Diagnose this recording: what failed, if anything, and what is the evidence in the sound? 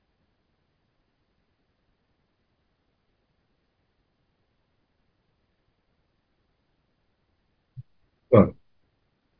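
Nothing in this speech recording points to a failure at any stage of the chain. There is no audible event to diagnose.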